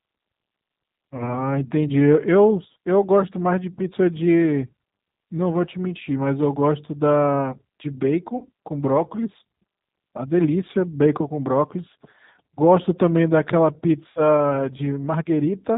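The whole clip has that narrowband, slightly gritty G.729 codec character. Everything above 4 kHz is gone, so the speech sounds boxed-in and a little synthetic. The damage is plainly audible, which fits the 8 kbit/s G.729A flavour. The codec rebuilds each 10 ms frame from a vocal tract filter, a pitch predictor and a handful of pulses, so you hear a rough edge rather than clean detail.

Then there are three spots of VoIP packet loss concealed by the speech codec. The first is around 1.17 to 1.24 s, with about 20 ms missing. The second is around 8.38 to 8.49 s, with about 40 ms gone. The third is around 14.1 to 14.22 s, with about 60 ms lost. Those gaps fit one, two and three dropped packets. In each case the decoder keeps extending the last pitch and filter while fading the gain, so the sound smears into a short fading tail. Because each frame builds on the one before, the speech stays a bit weak and off for a moment after audio returns.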